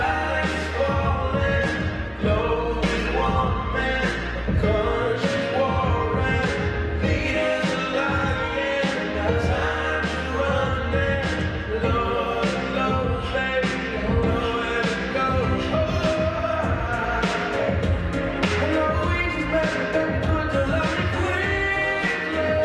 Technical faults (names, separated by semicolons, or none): call bitrate drop